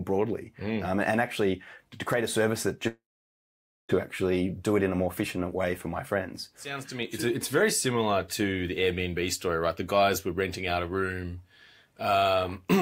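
From 2.87 to 3.91 s, a fading buzz or hiss and then 0.88 s of silence replace 1.02 s of audio, likely a long network dropout.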